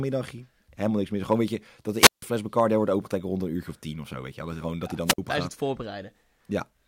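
Two wireless microphone squelch dropouts break up this speech. The first runs from 1.98 to 2.22 s, right after "weet je dat de": the radio link fades, hiss creeps up, then the receiver's squelch shuts the output for about 157 ms before the voice comes back on "fles daar". The second, shorter one sits at 5.05 to 5.18 s after "gewoon dat hij", with a mute of roughly 50 ms.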